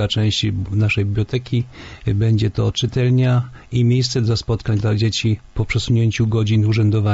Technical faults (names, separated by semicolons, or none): none